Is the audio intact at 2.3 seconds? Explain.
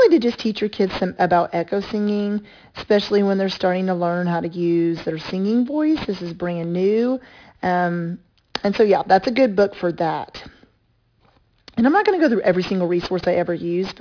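No. At 2.3 seconds, as throughout, the speech sounds gritty and metallic from aliasing: it was resampled to 11 kHz unfiltered, folding content above 5.5 kHz back as false tones roughly 20 dB down.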